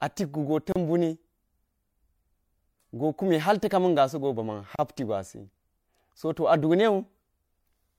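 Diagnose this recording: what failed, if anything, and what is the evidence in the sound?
Codec stage: gap at a join of encoded pieces. Speech drops out for 34 ms at 0.72 s and 32 ms at 4.76 s, after "ta̱ kamiga̱ sogo ba̱ma̱n". The four-second pieces kept their untrimmed encoder padding.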